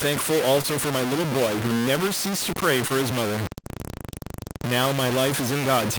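Across the whole speech clip runs a harsh, grainy distortion that tracks the level, with quiet passages sputtering or dropping out. The likely cause is low bit depth without dither, consistent with about 3-bit truncation. The error sits nearly as loud as the signal, showing as dense broadband noise on a spectrogram and coarse staircase steps on the waveform.

Short concealed packet loss occurs at 0.61, 2.88 and 3.62 s. Each time about 20 ms of audio failed to arrive, and the receiver filled the gap by extending the preceding sound. This is heard as a brief smear or wobble, and appears as a short, overly smooth patch in the spectrogram.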